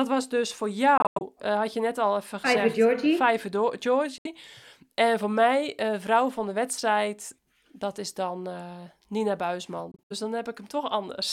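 At 0.98 s, right after "was dus voor", the speech breaks into silent gaps until about 1.23 s, just before "eh had je net", and it picks up as if it had kept running underneath: a Bluetooth dropout, likely from packets reaching the headphones too late and being thrown away. Similar abrupt holes come at 4.18 to 4.26 s and 9.92 to 10.12 s. The first and last are choppy, stuttering runs rather than single holes.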